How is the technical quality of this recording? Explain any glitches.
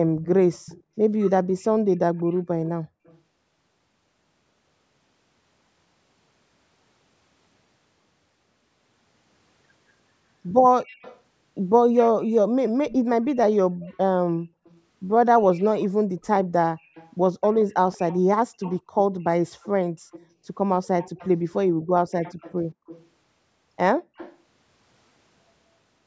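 The recording is marred by a recurring echo leak and one brief dropout of the room sound. The speech is band-limited to 8 kHz by the call's microphone processing.

From 0.24 to 3.19 s, 10.84 to 12.93 s, 13.89 to 23.05 s and 24.16 to 24.37 s, the likely cause is a far-end echo canceller failing to remove what its microphone picked up from a loudspeaker. A faint copy of the speech trails 182 ms behind, roughly 25 dB down at first and closer to 20 dB down from 13.89 s.

From 13.69 to 13.88 s, background gated by the echo canceller occurs. The canceller clamped the microphone down by about 40 dB while the loudspeaker played, so the room tone vanishes for about a fifth of a second, then returns.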